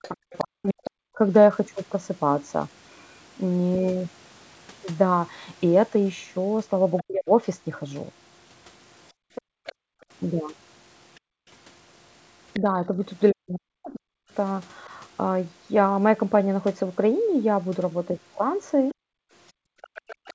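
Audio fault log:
0.02–0.72 s, 6.98–12.6 s, 18.92–20.34 s: other side's voice leaking through. A second, quieter voice sits roughly 15 to 20 dB under the talker. Likely incomplete echo cancellation of the loudspeaker.
0.09–1.19 s, 7.02–7.31 s, 12.61–14.92 s, 18.94–20.34 s: speech suppressed in double talk. The talker dips or breaks up, by up to about 40 dB, less near the end. Both sides overlap here, so the canceller likely turns everything down.
9.12–11.47 s, 18.96–19.95 s: background gated by the echo canceller. Room sound drops out by about 40 dB, then returns when the canceller releases the microphone.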